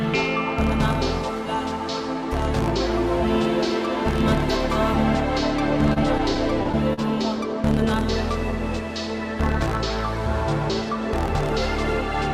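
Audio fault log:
5.93–6.99 s, repeated stalls (stutter): The sound hitches six times. Late-arriving packets kept draining the jitter buffer. Each gap, at most 40 ms, was filled by continuing the last sound. Nothing is lost, but 100 ms of fill makes the passage drag.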